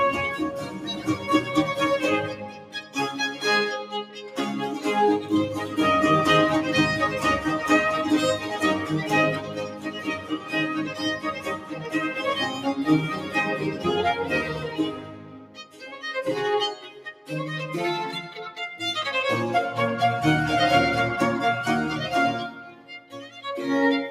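A noise suppressor designed for speech has been left running on this audio, which is not speech. It treats steady tones, ambience and decay as noise and pulls them down. Sharp onsets pass through, but anything held or fading sinks. The level keeps swinging by around 10 dB, so the sound pumps and thins out across the whole clip. Specific stretches of sound are cut by the noise suppressor: 0.57 to 1.29 s (about 6 dB down), 2.29 to 2.96 s, 4.04 to 4.37 s (about 8 dB), 9.39 to 11.96 s, 12.49 to 16.01 s, 16.75 to 17.29 s, and 22.53 to 23.41 s. Apart from the first and third, each dips by about 9 dB at its deepest. In these spans the suppressor judged sustained material to be noise. Tails collapse early, and held sound drops away for up to two seconds at a time.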